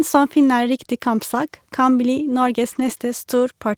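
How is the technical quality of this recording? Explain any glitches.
The speech has two short rough patches where lost packets were rebuilt from error correction. There are no dropouts. One brief patch is at 0.39 s. A longer one of about 100 ms runs from 2.71 to 2.89 s, just after "kan bli". The decoder filled those lost packets from the low-bitrate backup copy carried in the next packet, so the sound continues but turns grainier and noisier for those moments.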